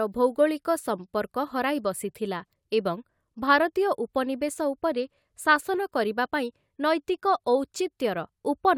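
No technical faults can be heard anywhere in the recording. The speech runs without any break, glitch or disturbance in the signal from the beginning to the end.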